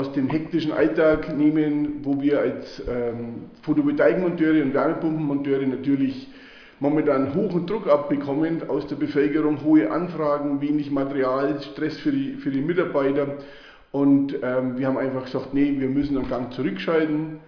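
Listening closely, nothing in the audio stood out as a technical problem at any point.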